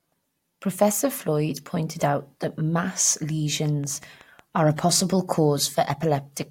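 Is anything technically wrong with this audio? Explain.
Yes. From 3.66 to 4.59 s, just after "pointed out that mass" and before "a possible", there is a train of clicks. About seven sharp pulses arrive at a regular 5.4 per second. Each has much the same shape. They peak at about the level of the speech itself. They sound like steady ticking laid over the voice. The likely cause is interference from nearby equipment or a faulty connection or power supply injecting repeated pulses.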